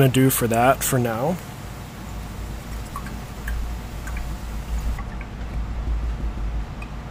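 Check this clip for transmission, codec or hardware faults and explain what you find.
One fault stands out: pre-emphasis left on. From 0.0 to 4.98 s the treble is boosted by about 10 dB at 10 kHz relative to 1 kHz, a tilt that fits a 50 µs FM curve whose matching de-emphasis was never applied. The sound is thin, bright and sibilant, and a spectrogram shows energy rising steadily above a few kHz before dropping back once it ends.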